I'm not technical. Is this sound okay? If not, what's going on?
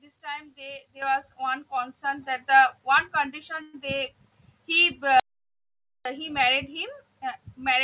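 No. There are three separate problems in this speech recording.

Microphone volume stepped up: at 1.02 s and again at 2.04 s, the whole sound suddenly gets louder. The voice and the background jump together. The call software turned the microphone up in one step each time, and the first jump is the bigger one.

Call audio freeze: from 3.62 to 3.75 s, the sound stalls for a moment. A short fading buzz fills the gap, then the speech carries on where it stopped. Nothing is lost. This is likely data arriving late over the network, so the receiving end had nothing new to play.

Audio dropout to silence: from 5.20 to 6.05 s, the sound cuts out completely. There is dead silence, not even background noise. Whatever was said in that stretch is gone. The likely cause is the microphone input being lost briefly, such as a loose connection or an accidental mute.

The recording also sounds like a phone line, with nothing above 4 kHz, because it went through a standard call system.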